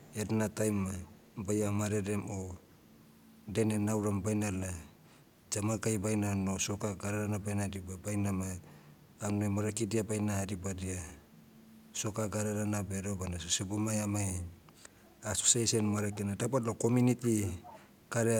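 A loudspeaker echo canceller on the far end likely let some of its microphone pickup through. The resulting echo leak returns a faint, 387 ms-delayed copy of the speech at 0.0–0.27, 1.04–1.36, 2.67–3.07, 4.97–5.35, 11.27–11.4, 14.73–14.98, 16.11–16.17 and 17.22–18.08 s. It is barely audible mid-clip and most noticeable in the last stretch, where it sits about 20 dB below the speech.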